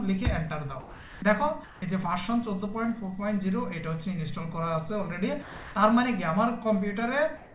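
At 0.8 s the sound cuts out until 1.22 s, and steady hiss fills the gap. That's likely sound dropped by the voice detector: it mistook part of the signal for background and stopped sending, so about 170 ms of real sound is gone. The same thing happens again from 5.42 to 5.75 s, losing about 200 ms.

Comfort noise in place of the background shows up from 1.64 to 1.82 s and again from 7.37 s to the end. The real background, about 21 and 25 dB below the loud parts, likely gave way to flat synthetic noise, about 1 dB quieter the first time and at the same level the second. What you notice is the texture going smooth, all within the narrowband call sound that stops at 4 kHz.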